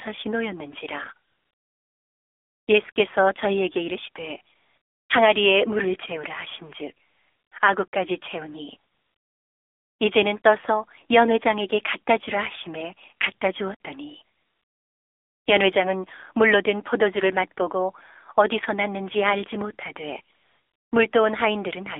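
Speech heard through the AMR narrowband mobile codec. The band runs from about 300 Hz to 3.6 kHz, so everything above is gone. The voice sounds plainly buzzy and synthetic, which fits the low 7.4 kbps mode. AMR comfort noise also appears nine times, from 1.28 s to 20.92 s. Pauses last from 20 ms to 1.4 s, the longest at 1.28 s. In each, the real background gives way to smooth, steady synthetic noise that switches in and out, because no speech frames were sent.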